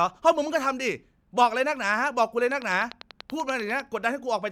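From 2.51 s to 3.81 s a train of clicks runs over the speech: around fifteen near-identical pulses at a steady 10 per second, heard as a regular ticking that carries straight through the gaps between syllables. The clicks peak roughly 10 dB above the speech level, so they sit clearly on top of it. Such evenly spaced, same-shaped pulses are likely interference from nearby equipment or a faulty connection or power supply.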